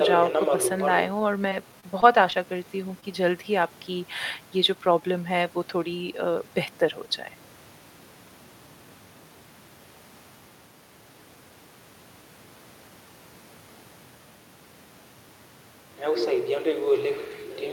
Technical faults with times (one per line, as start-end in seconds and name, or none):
1.49-2.47 repeated packet loss (robotic sound)
3.00-3.04 short concealed packet loss